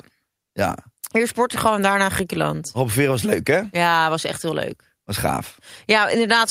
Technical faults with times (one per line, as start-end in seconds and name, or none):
none